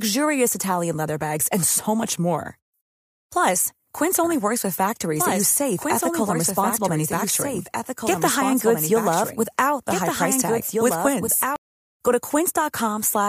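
From 4.24 s to 11.56 s the speech plays twice at once: a second copy, a few decibels quieter, trails about two seconds behind, clean and full-band with no reverb, switching on and off abruptly. This doubled audio track likely comes from a second, slower capture path mixed in.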